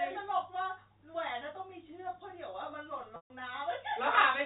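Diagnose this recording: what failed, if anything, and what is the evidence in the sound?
Network stage: packet loss with pitch repetition at 3.16–3.3 s (140 ms). A repeated pitch period fades out, shown as frozen harmonics dimming into a silent gap.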